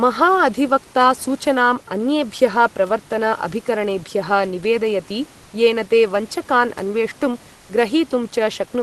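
At 7.55 to 7.69 s, for about 140 ms, the room background gives way to a smooth, featureless hiss about 2 dB quieter: comfort noise in place of the background. The likely cause is discontinuous transmission, the sender pausing while the receiver filled the gap with shaped synthetic noise.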